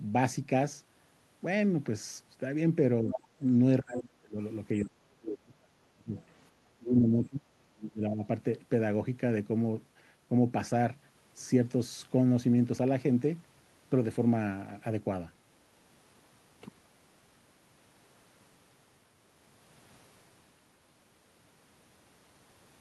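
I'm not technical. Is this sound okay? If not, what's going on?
No, there are two related problems, both in roughly the first eight seconds.

The first is speech suppressed in double talk. When both people talked at once, the call's echo canceller likely couldn't tell this talker apart from the loudspeaker echo, so it turned everything down. The speech sinks from 3.02 to 3.4 s, then drops much more deeply, nearly cutting out, from 3.82 to 4.38 s, 4.85 to 6.22 s, 6.62 to 7.46 s and 7.7 to 8.24 s.

The second is the other side's voice leaking through. The same echo canceller likely didn't fully remove the other person's voice playing from the loudspeaker, so it reached the microphone too. A scrap of it comes through from 3.1 to 3.23 s, a little quieter than the main talker, and a very faint trace follows from 6.2 to 6.24 s.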